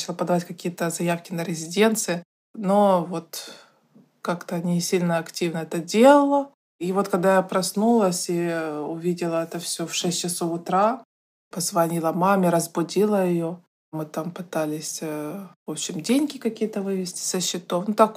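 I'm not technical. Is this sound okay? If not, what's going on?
Yes, this sound is okay, and there's nothing going on with it that needs fixing.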